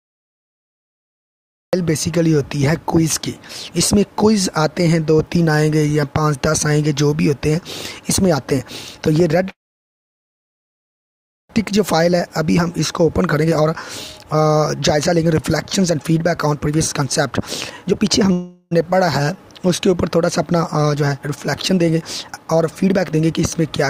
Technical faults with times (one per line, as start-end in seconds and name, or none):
0.00-1.73 cut-off start
9.51-11.51 call audio freeze
11.65-13.75 jitter buffer speed-up
14.18-17.32 jitter buffer speed-up
17.82-18.31 jitter buffer speed-up
18.32-18.73 call audio freeze
19.79-23.70 jitter buffer speed-up